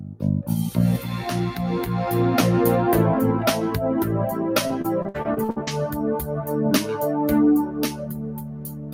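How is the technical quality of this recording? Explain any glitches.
The recording is compromised by three kinds of fault: a speech-oriented noise suppressor working on non-speech material, two places where it cuts the sound, and a burst of packet loss.

Noise suppressor applied to music or sounds: throughout the clip, a suppressor tuned for speech treats steady and decaying content as noise. Its gain swings by around 10 dB, so attacks pass while sustained parts and tails sink. The result is pumping and a thinned, fluttering texture.

Sound cut by the noise suppressor: at 0.00–0.23 s, about a fifth of a second of the opening is pulled down by as much as about 9 dB. The same drop of up to about 9 dB happens again from 7.67 s to the end. In both places the sustained content is classified as noise and attenuated, so the level sags and decays are truncated.

Repeated packet loss (robotic sound): between 4.67 and 5.69 s, data keeps arriving late or not at all. 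Each hole is bridged by extending the previous audio, and the longest hole is 57 ms. About 300 ms is concealed, roughly 29% of that stretch, which gives choppy playback with fragments missing.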